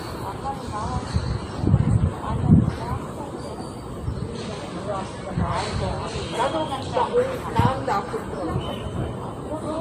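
From start to finish there's nothing above about 15.2 kHz, with layered artefacts that likely come from transcoding between lossy codecs, consistent with WMA followed by low-rate Vorbis.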